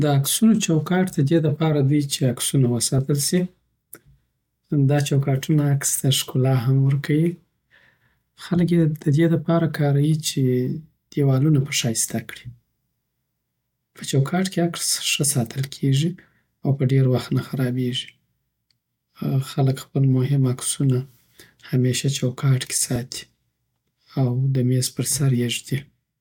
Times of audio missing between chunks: 17.96

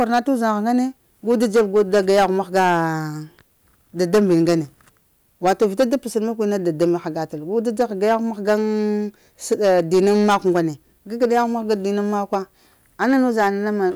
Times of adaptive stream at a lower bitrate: none

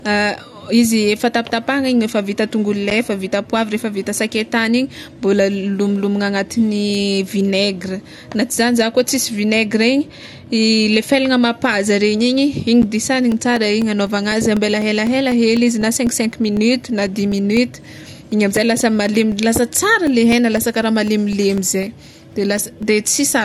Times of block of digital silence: 2.90, 12.82

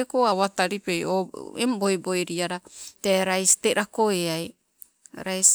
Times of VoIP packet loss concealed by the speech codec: none

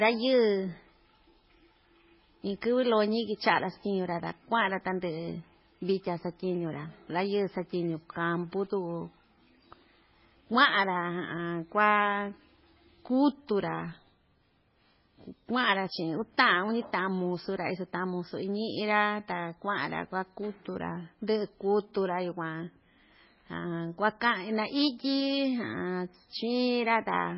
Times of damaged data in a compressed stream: none

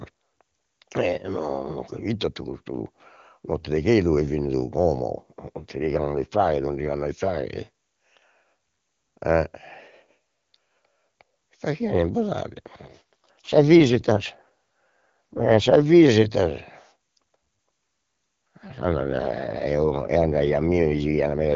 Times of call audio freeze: none

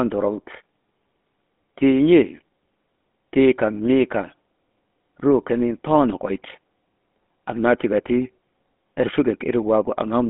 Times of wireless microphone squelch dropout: none

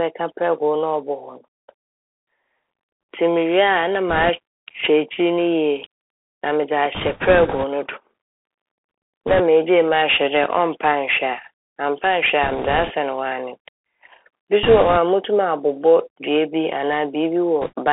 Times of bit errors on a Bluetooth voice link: 4.09-4.30, 6.95-7.65, 9.27-9.40, 12.43-12.91, 14.63-14.97, 17.61-17.73

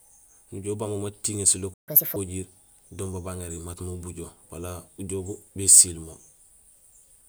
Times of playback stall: 1.74-1.88

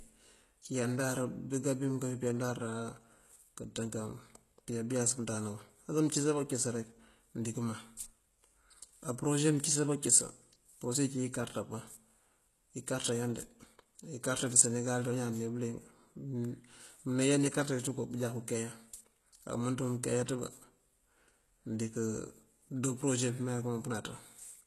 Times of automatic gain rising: none

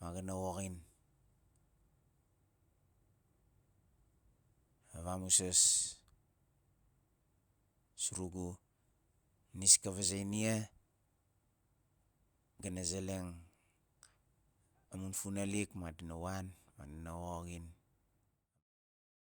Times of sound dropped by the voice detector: none

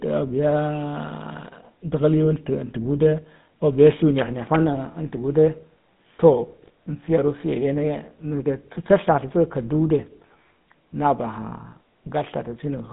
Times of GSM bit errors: 6.63-6.70

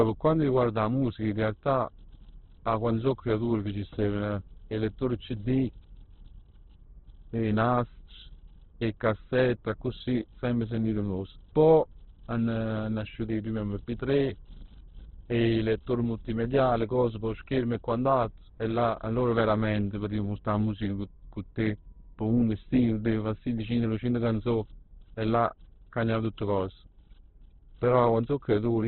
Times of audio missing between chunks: none

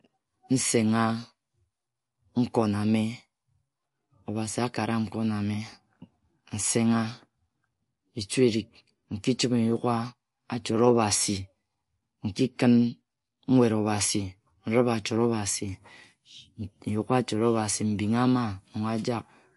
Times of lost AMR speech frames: none

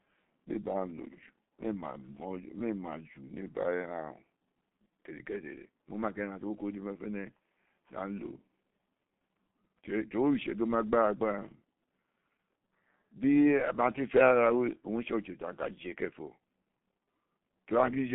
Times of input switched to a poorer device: none

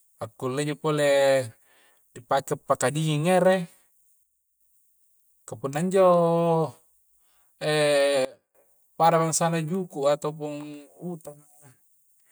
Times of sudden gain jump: 4.23-4.61, 8.25-8.55

